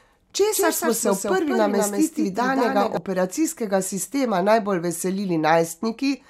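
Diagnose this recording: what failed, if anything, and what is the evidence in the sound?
From about 0.53 s to 2.97 s there's a doubled audio track: the speech is joined by a second, full-band copy trailing around a fifth of a second behind and a few dB quieter. It has no reverb tail or room colouring, and it cuts in and out abruptly, dropping away just before "operacijskega sistema". That points to the capture or driver stage, likely the same signal reaching the mix twice through a slower second route.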